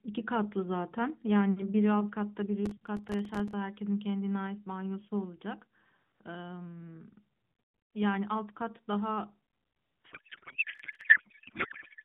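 From 2.66 to 3.53 s there's processor overload crackle: the CPU keeps missing deadlines on tiny buffers of a few milliseconds, leaving dozens of silent gaps that add up to gritty tearing. From 10.12 s to the end it's a codec payload misread. The AMR frames sound like octet-aligned data being unpacked as bandwidth-efficient, so the speech turns into garbled warble. A shorter crackle burst at 10.75 to 11.01 s rides on top of it.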